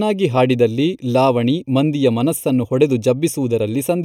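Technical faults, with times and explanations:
Throughout, channel delay (comb filtering): one channel lags the other by roughly a third of a millisecond, and summing them to mono cancels shared content at evenly spaced frequencies, starting near 1.5 kHz. The fixed notches leave the speech hollow and phasey.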